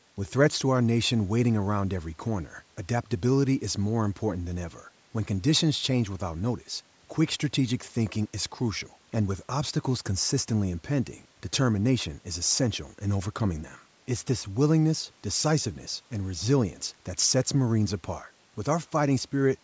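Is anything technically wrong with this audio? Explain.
No, nothing stood out as a technical problem on listening to this speech recording.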